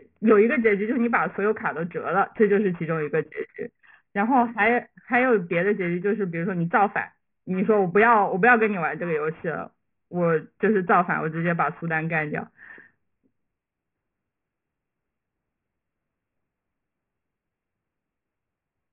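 Aliasing runs throughout: the speech was downsampled unfiltered, folding energy above 3 kHz back down, so sibilants sound gritty and metallic rather than merely dull.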